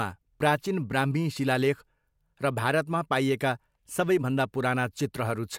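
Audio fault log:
No faults are logged for this speech clip.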